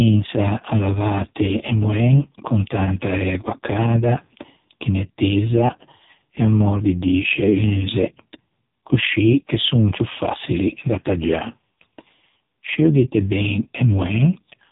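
From start to finish, the speech carries AMR narrowband mobile codec damage. Nothing above about 3.8 kHz survives, so sibilants lose their hiss and the sound is boxed in. The codec rebuilds speech from a vocal tract model excited by a handful of pulses per 5 ms subframe. Here the damage is heavy, which fits AMR-NB's lowest 4.75 kbps mode. Voiced sounds turn buzzy and synthetic, with a rough, robotic edge.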